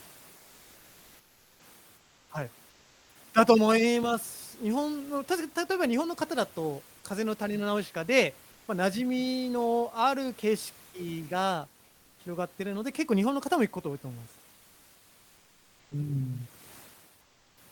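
Likely discontinuous transmission, with the sender going quiet in pauses and the receiver filling them with comfort noise in place of the background, at 1.97–2.29, 2.69–3.15, 8.51–8.67, 11.85–12.19 and 17.21–17.57 s. The room noise, about 30 dB below the speech, turns flat and featureless and drops about 2 to 5 dB.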